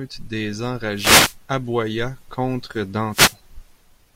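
At 0.93 to 1.37 s and again at 3.10 to 3.37 s there's a wireless microphone noise hit: the FM signal fades and receiver hiss swishes over the speech.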